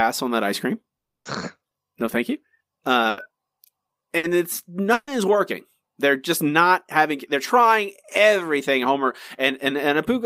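From 0.97 to 1.27 s the audio cuts out for about 280 ms. The gap is silent throughout before the speech returns with that stretch gone. This is likely a long network dropout, where no packets reached the receiver.

Three bursts of packet loss follow, at 3.09 to 3.19 s (80 ms), 4.17 to 4.25 s (60 ms) and 4.93 to 5.09 s (140 ms). In each, the receiver extends the preceding sound as a fading buzz or hiss, then resumes later with the gap's content missing.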